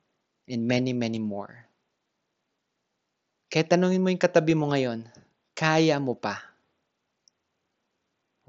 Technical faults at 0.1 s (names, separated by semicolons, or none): none